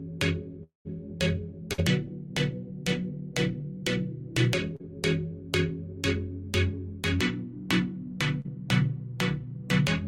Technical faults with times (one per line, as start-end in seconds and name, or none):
0.63-0.87 long network dropout
1.73-1.80 burst of packet loss
4.76-4.83 short concealed packet loss
8.41-8.46 short concealed packet loss